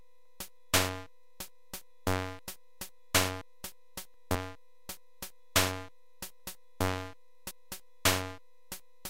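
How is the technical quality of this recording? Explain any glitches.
Three abrupt skips disrupt the recording. A dropped buffer (overrun) occurs at 2.39 s, 3.41 s and 7.51 s. At each, the sound jumps ahead, losing roughly 0.3 s, then about 150 ms, then about a tenth of a second. The likely cause is buffers not read before being overwritten.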